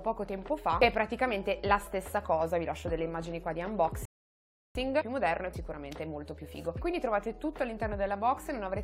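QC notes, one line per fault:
4.05–4.75 s, rebuffering stall: the audio just drops to dead silence for about 0.7 s, then picks up again exactly where it left off. That's the player running dry on downloaded data and waiting for more to arrive before carrying on. You don't lose any of the sound, since nothing gets skipped or chopped, but that gap adds about 0.7 s to the clip.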